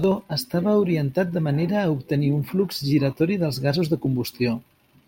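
No technical faults can be heard anywhere in this speech recording.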